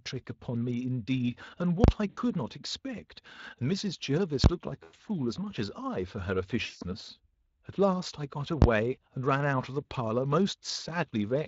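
At 1.84 to 1.88 s a processing stage produced invalid numbers at full scale: infinite or undefined values were clamped to the extreme sample value for a 40 ms block. The output sits flat at one extreme value, so you hear a loud pop where the block begins and another where it ends, with nothing in between. The same failure recurs at 4.44 to 4.46 s and 8.62 to 8.64 s. Those blocks last only 20 ms, so each collapses into a single sharp bang.

From 2.09 to 2.20 s, 80 ms of packets never arrived, and the Speex decoder filled the gap with VoIP packet loss concealment. It extrapolates from its last pitch and spectral envelope while lowering the gain step by step, so the sound smears into a fading buzzy tone. Because each concealed frame feeds the next, the speech stays thin after packets resume. At 4.83 to 4.99 s, 120 ms of loss is scattered across 160 ms, with a longest gap of 100 ms, giving a stuttering, broken smear. 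At 6.65 to 6.83 s, 160 ms is lost, the longest loss in the clip. A brief 40 ms dropout at 9.85 to 9.92 s is concealed the same way. Around these dropouts, the Speex coding itself adds only slight noisiness to the speech, consistent with a mid-rate setting near 24 kbps.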